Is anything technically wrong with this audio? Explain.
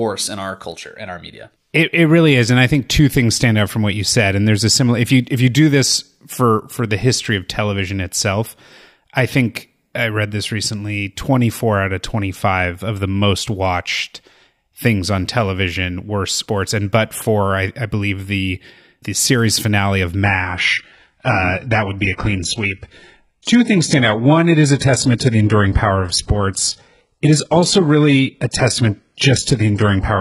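Yes. From 20.24 s to the end of the clip, the speech abruptly turns dull, with nothing left above about 11.1 kHz, and more codec artefacts, but no gap or dropout. This is an adaptive stream at a lower bitrate. When the connection slowed, the player switched to a leaner encoding, which fits a change from AAC at around 96 kbit/s to HE-AAC at roughly 12 kbit/s.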